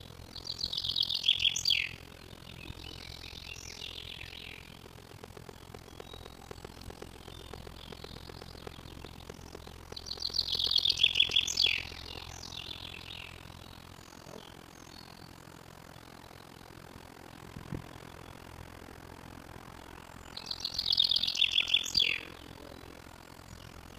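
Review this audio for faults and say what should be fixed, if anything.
Overlap-add ripple runs through the whole clip. The sound was split into windowed frames and rejoined with an overlap that does not add up to a steady gain. So the level swings once per frame, around 40 times a second. The swing is deep, about 60 dB from crest to trough. It gives the sound a rapid, rough pulsing that never lets up. To prevent it, use a window and hop size whose overlapped frames sum to a constant.

A train of clicks starts at 4.86 s and ends at 12.31 s. The pulses come at a regular 7.92 per second, about 70 in all. Each one has much the same shape. They peak about 10 dB above the surrounding sound and tick over pauses too. Some source was injecting a repeating pulse into the signal. The likely cause is interference from nearby equipment, a faulty connection or a power supply fault. To prevent it, check cables and connectors, isolate the power supply and move the recording chain away from other equipment.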